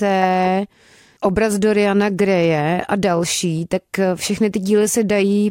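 No technical faults can be heard anywhere in this recording.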